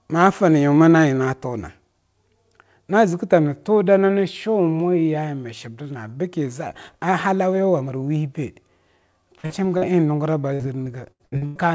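Around 9.38 s there's a burst of packet loss: roughly 60 ms of the call went missing in a row, and the receiver kept the last sound going while fading it down until about 9.46 s. You hear a brief held buzz or hiss dying away, and then the audio picks up further along with that slice gone.

Right on its heels comes a short concealed packet loss from 9.46 to 9.52 s, another 40 ms or so the decoder never got in time. It was patched by extending the last sound and blending back into the real signal, so it comes across as a little smear or wobble. The same thing happens again at 9.78 to 9.84 s, again about 40 ms, another quick smear.

From 10.54 to 11.57 s it turns into repeated packet loss with a robotic sound. Six separate gaps land in about a second, the longest near 96 ms, and about a third of that stretch is filled-in sound rather than real audio. Each hole gets patched by continuing what came before, and the next one hits soon after, so it sounds choppy with pieces missing.

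All of this rides on a WebRTC call path with the G.722 codec. Nothing above 8 kHz comes through, which fits a 64 kbps wideband setting.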